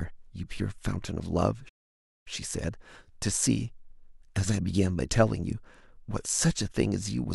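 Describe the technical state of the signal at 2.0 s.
At 2.0 s the speech sits inside a playback stall running from 1.68 to 2.28 s: the sound halts mid-flow for about 0.57 s of silence, likely because the player ran out of data or its thread was blocked. Unlike a brief dropout, this pause is long enough to hear as a distinct stop.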